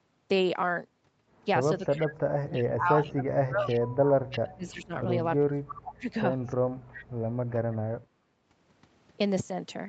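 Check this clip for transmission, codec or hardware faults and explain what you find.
Two faults are present: speech suppressed in double talk and echo leak. Audio is band-limited to 8 kHz.

Speech suppressed in double talk, 1.79–3.88 s and 4.43–6.14 s. The speech dips by roughly 35 dB. Likely cause: the echo canceller mistook overlapping talk for echo and muted both.

Echo leak, 2.56–4.4 s, 5.69–5.75 s and 6.46–7.05 s. A copy trails 326 ms behind, about 15 to 20 dB down. A loudspeaker's residual echo likely escaped cancellation.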